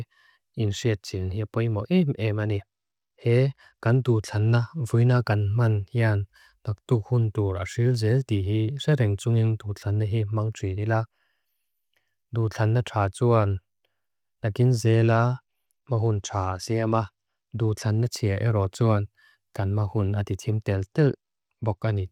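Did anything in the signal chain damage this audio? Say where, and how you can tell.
Yes. The codec stage shows a Bluetooth SBC bit pool drop. After "hipoimo em", at 2.35–5.17 s, 14.85–18.04 s and 20.72–22.02 s, treble dulls and grit rises. Starved top sub-bands and coarse quantisation fit a bit pool falling from 28 to 14.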